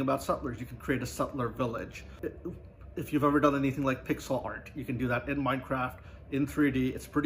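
No dropouts, distortion, noise bursts or timing problems can be heard anywhere in the recording.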